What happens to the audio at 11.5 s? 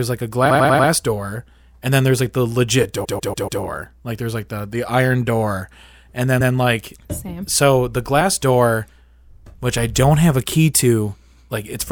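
Nothing goes wrong at 11.5 s; the audio is intact there.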